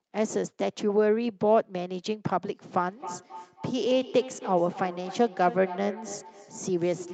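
Feedback echo between two devices runs from 2.88 s to the end of the speech clip, the repeats peaking about 15 dB below the speech. A second device is replaying this microphone's sound, which returns roughly every 0.3 s, beyond the first device's echo canceller.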